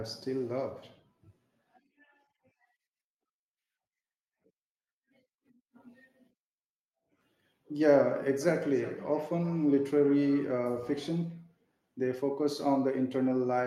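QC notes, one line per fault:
8.41–10.57 s, feedback echo between two devices: the speech returns roughly every 400 ms, about 20 dB down, as a second device's microphone recaptures the first device's playback.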